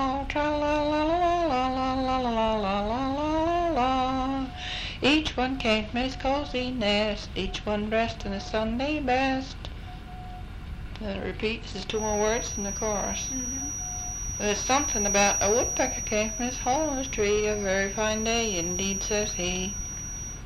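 From 11.88 s to the end of the audio at 20.46 s, a feedback whistle sits behind the sound: a thin, steady tone at 5.8 kHz, only a few decibels below the signal, swelling and fading slowly in level. It is likely caused by a loudspeaker-to-microphone loop held just at the edge of feedback, sustaining one frequency without growing. On a spectrogram it appears as a sharp horizontal line at 5.8 kHz beginning at 11.88 s; the waveform shows little more than a slightly thickened trace.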